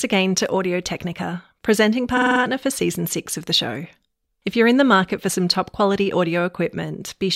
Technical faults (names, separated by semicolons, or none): repeated frames